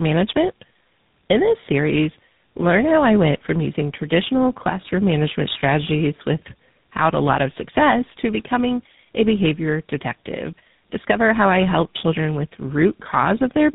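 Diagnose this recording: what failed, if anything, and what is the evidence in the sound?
The failure is at the codec stage: tandem speech coding. The speech sounds rough, muffled and warbly from start to finish. Nothing is heard above 3.8 kHz. This points to about three speech codecs in a row, ending in GSM full rate. Each one re-encoded the previous one's degraded output.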